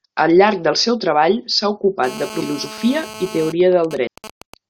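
From 2.04 to 3.52 s, just after "del seu treball s'ha", a GSM phone buzz from a nearby handset in a call sits about 15 dB below the speech. The circuit rectifies its 217 Hz radio bursts into a raspy drone, seen on a spectrogram as evenly stacked harmonic lines. At 2.40 s, damaged data in the compressed stream makes the decoder lose sync, giving a brief glitch that shows as a thin vertical smear. From 3.61 to 4.54 s, GSM signalling bursts, with the phone's user silent, sound as even ticks with a longer 217 Hz buzz twice a second, appearing as clustered spikes in the waveform and roughly 15 dB down. A second patch of damaged data at 4.06 s produces another short blip.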